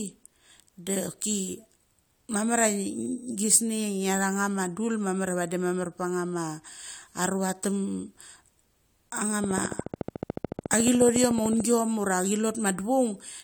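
A train of clicks runs from 9.44 s to 11.61 s: about thirty near-identical sharp pulses arriving at a steady 13.9 per second, each peaking roughly 10 dB above the speech. It sounds like a rapid, even ticking laid over the talker, continuing through any gaps rather than following the voice. The most likely cause is interference from nearby equipment or a faulty connection or power supply repeatedly injecting a pulse into the signal path.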